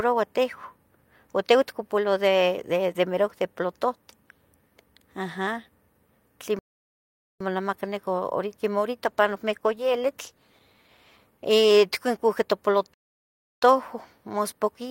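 A speech clip with two playback stalls and a call bitrate drop. The audio goes silent from 6.59 to 7.40 s and again from 12.94 to 13.62 s. Each time it resumes after a gap of about 0.8 s and 0.7 s. The likely cause is the player running out of data or its thread being blocked. From 9.06 to 12.57 s the speech turns coarse and muffled, with the highs trimmed away. This is a call bitrate drop. It sounds like the encoder fell from about 48 kbps to about 16 kbps, staying at its lowest for about 2 s before recovering.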